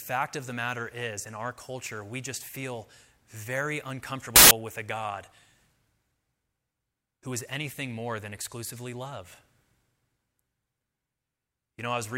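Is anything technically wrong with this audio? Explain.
Yes. From 4.36 to 4.51 s, between "we just feel very" and "with a", file tags are played as audio: an embedded cover picture's compressed bytes were decoded as samples, producing a 0.15 s burst of very loud white noise with abrupt edges.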